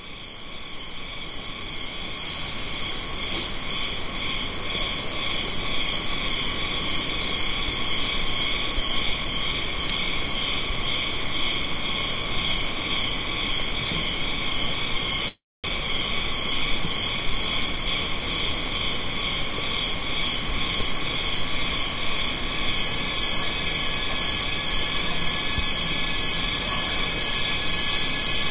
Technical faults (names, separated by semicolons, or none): call audio freeze; jitter buffer speed-up